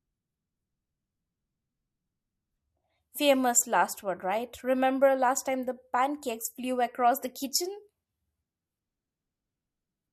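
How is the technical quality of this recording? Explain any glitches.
No glitches or technical faults can be heard anywhere in the recording.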